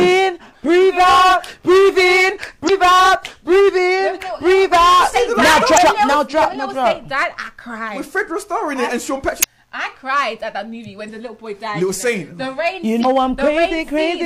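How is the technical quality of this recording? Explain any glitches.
The recording is marred by five brief glitches, at 2.65–2.70, 5.74–5.78, 9.39–9.45, 11.05–11.09 and 13.01–13.05 s, each about 40 to 50 ms long. They come from damaged data in the compressed stream: corrupted bytes left the decoder misreading frames and losing sync until it found the next valid frame header.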